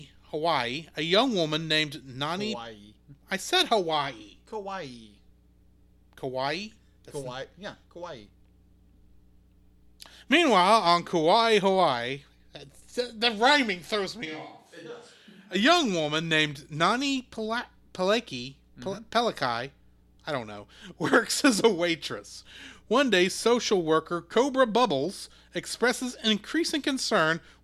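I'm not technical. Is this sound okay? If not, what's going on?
No, there's one rough patch. Right after "the rhyming throws me", at 14.27 s, the voice suddenly goes distant, hollow and a bit quieter, then snaps back at 15.54 s before "young woman named". That's a switch to a distant microphone, likely the camera's mic covering for the close one.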